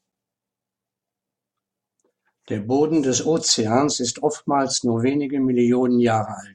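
No technical faults are audible.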